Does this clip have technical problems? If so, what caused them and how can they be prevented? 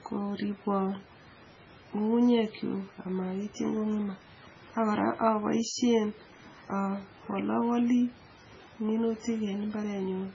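Yes. The speech sounds heavily smeared and watery throughout, with nothing above 7.4 kHz. This likely comes from MP3 compression at a starved bitrate, about 16 kbps. Encode at a much higher bitrate to prevent it.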